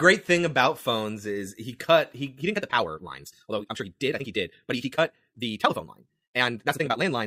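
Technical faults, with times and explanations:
2.39–7.26 s, time-stretched section: right after "is he cut he", the speech abruptly races ahead at nearly twice its pace, about 1.96 times faster, through to the end, yet the pitch stays put. It sounds rushed. This is likely software squeezing the passage to fit a shorter length, keeping the pitch by cutting out short slices of the waveform and splicing the rest together.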